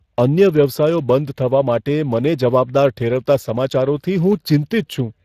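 Speex codec damage runs throughout the speech. This CELP coder spends too few bits on the excitation signal, leaving the voice plainly grainy and roughened, with a character that points to a rate near 22 kbps. Nothing remains above 15.3 kHz.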